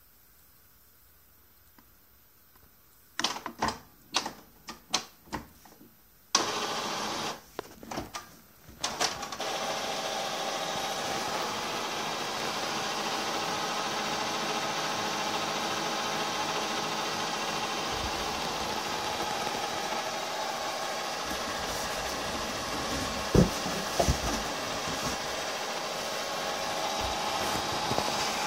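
A single loud pop lands at 23.35 to 23.38 s, a sharp thump roughly 10 dB above the surrounding audio. The sound carries on unbroken underneath it, so it is not a dropout or gap. It is likely an electrical transient from a plug, switch or static discharge.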